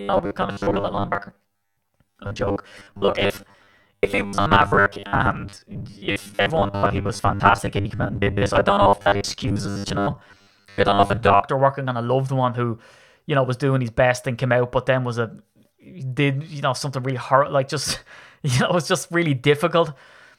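From 0.01 to 11.42 s the speech has robotic sound from repeated short buffers. It becomes a rigid, metallic buzz near 100 Hz that loosely tracks the words. This likely comes from audio arriving too slowly, so about half the sound is replaced by repeats of the last 10 ms.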